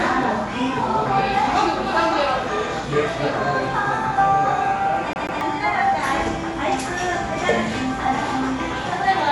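Dolby Digital compression runs throughout, likely the cause of a dull top end with nothing above 11.5 kHz and a rough, fluttering noise, which points to roughly 64 kbps encoding. CD stuck on one turn from 5.13 to 5.41 s: a 0.14 s stretch of sound repeats twice with a brief mute at each jump, as the laser skips back one track.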